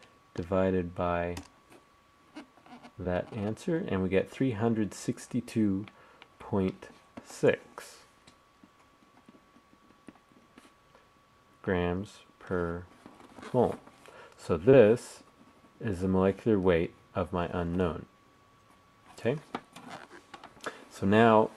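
At 3.03–3.06 s and 14.70–14.75 s, short concealed packet loss patches 20 ms of missing sound with extrapolation. Each is a brief smear, showing as a smooth, repetitive spectrogram patch.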